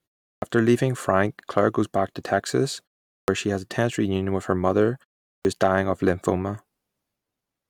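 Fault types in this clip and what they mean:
Clipped start after a pause: the playback path goes idle during silence and needs roughly 80 ms to wake, so the onset of speech after each pause is lost. It happens at 0.34 s, at 3.2 s before "she has a tense", and at 5.37 s between "reunion with her mother" and "is dying of lymphoma". On a waveform, the sound jumps abruptly from flat silence to speech with no rise, and a spectrogram shows a hard vertical edge where the first sounds should be.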